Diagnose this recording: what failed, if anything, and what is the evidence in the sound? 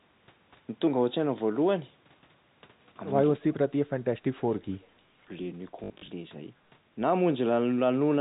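From 3.38 to 4.79 s the speech dips hard, down around 35 dB at its deepest, in pieces totalling about a second and a half. That's call processing: speech suppressed in double talk, likely the echo canceller turning down its own talker along with the loudspeaker echo when both sides spoke at once.

Right after, at 4.82 to 4.87 s, a faint delayed copy of the speech leaks through, about 347 ms late and around 35 dB down. That's an echo leak, a call-processing fault: the loudspeaker side's canceller likely let through part of what its loudspeaker put into its microphone.

Between 5.84 and 6.08 s, 140 ms of audio is lost across a 240 ms stretch, the longest gap 60 ms. That's network-side packet loss with last packet repeated. The replayed chunks stutter robotically, which fits 20 ms packets. The telephone band itself stays intact.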